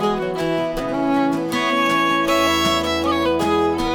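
No technical faults are audible.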